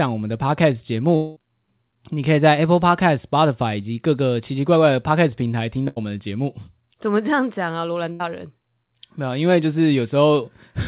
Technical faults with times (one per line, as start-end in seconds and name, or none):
1.16-1.39 long network dropout
5.88-5.99 burst of packet loss
8.12-8.23 burst of packet loss